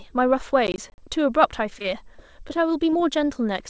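From 0.67 to 0.98 s the audio processing fell behind its deadlines again and again, missing around seven buffers that fit a size of roughly 20 ms. Each missed buffer was left silent, so this processor overload crackle is heard as a gritty, tearing burst of hard-edged dropouts over the speech.

Between 1.70 and 2.57 s the call suffered repeated packet loss, heard as robotic sound. There are six short holes, none longer than 20 ms, totalling 40 ms. About 79 ms of synthetic continuation patches them, roughly a tenth of the stretch, making the speech choppy.

From 2.90 to 2.94 s a short concealed packet loss occurs. About 20 ms of audio arrived too late, and the receiver extended the preceding sound for 20 ms before rejoining the real signal. This leaves a brief smear or wobble in the speech. The band stops at 8 kHz, consistent with a G.722 call path.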